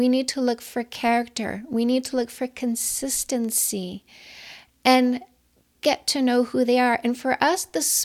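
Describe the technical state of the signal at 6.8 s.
At 6.8 s the speech signal is intact, with no audible technical fault at that moment.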